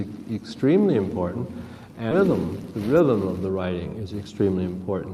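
Around 2.11 to 2.13 s there's a skip ahead: a chunk of audio, something like 0.4 s of it, just isn't there. It got dropped either in transit or when the jitter buffer overflowed while newer audio was already queued, so playback lands straight on the later material. Nothing fills the join, and the two sides butt right up against each other. You hear it as an abrupt lurch forward rather than a silence.

Right after that, from about 2.21 s to 4.60 s, the jitter buffer speed-up kicks in. The buffer was sitting on more audio than its target, so the receiver kept snipping out tiny slices a pitch period or so long, over and over, to claw back the delay. Across that stretch roughly a fifth of a second gets trimmed away, and the sound runs at about 107% speed with the pitch unchanged, so it comes across as slightly rushed.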